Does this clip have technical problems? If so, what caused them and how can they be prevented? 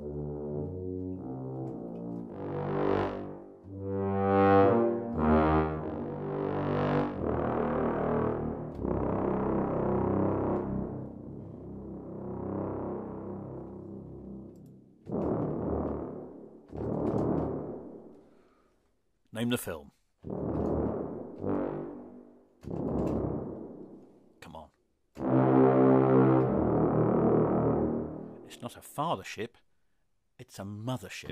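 No, there are no technical problems to hear in this clip. Nothing in the audio points to a cause that would need preventing.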